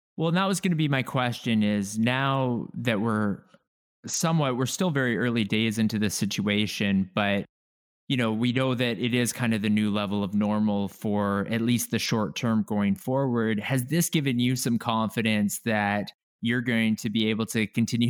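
No technical faults are audible anywhere in the recording.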